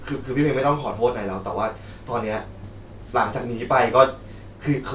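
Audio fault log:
No faults detected: the speech signal stays continuous and intact across the clip, with unbroken timing.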